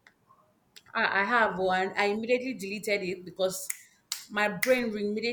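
No technical faults can be heard in the speech at any point.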